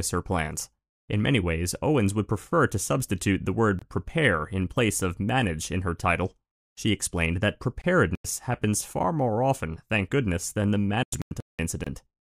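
Gaps between chunks appear at 3.79–3.82 s, between "prefer to substitute the" and "prepare in place of", and again at 7.82–7.84 s and 11.84–11.87 s. Each is a 25 ms hole recurring every 4 s. A corrupt frame muted at 8.06–8.25 s, between "explained that" and "happens far more often", and another at 11.03–11.59 s cut the sound abruptly to silence. The decoder rejected damaged frames, which fits two frames and then six.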